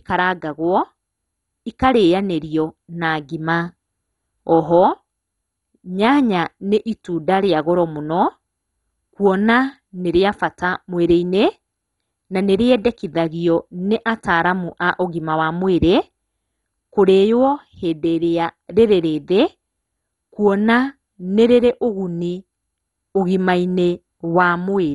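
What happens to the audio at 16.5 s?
At 16.5 s the speech carries the same MP2 compression damage heard across the whole clip. The sound is dull and gurgling, with a granular roughness, and nothing survives above 11.2 kHz. This is likely MPEG Layer II coding starved of bits, which fits a rate around 56 kbps: upper sub-bands are switched off and the remaining ones are coarsely quantised. A spectrogram shows a hard ceiling at 11.2 kHz, with blocky bands flickering on and off beneath it.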